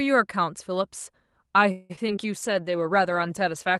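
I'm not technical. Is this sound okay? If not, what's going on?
No. From 1.71 to 2.19 s there is repeated packet loss, which gives a robotic sound. Pieces of the voice went missing four times in half a second. The call filled most gaps by stretching the last sound, so the speech turns choppy and robotic. The longest gap is almost 0.2 s.

From 2.34 s to the end, there is a call bitrate drop. The connection seemed to weaken, so the call squeezed the voice into far less data. The speech becomes rougher and more muffled, with a watery edge, and it stays that way until the clip ends.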